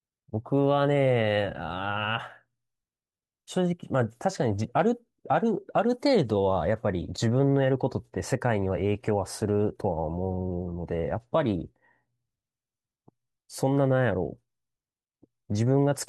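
No technical faults can be heard anywhere in the recording. Nothing in the signal draws attention at any point in the speech.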